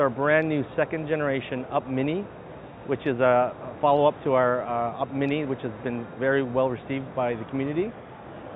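No technical faults can be heard anywhere in the clip. Nothing in the audio calls for a timestamp or a note.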